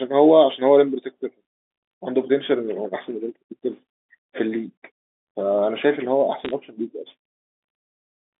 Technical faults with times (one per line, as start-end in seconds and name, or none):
6.45-6.51 bit errors on a digital phone line